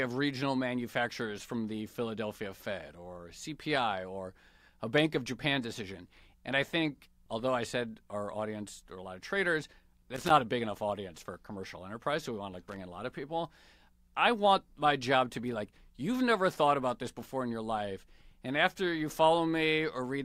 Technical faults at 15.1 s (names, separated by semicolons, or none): none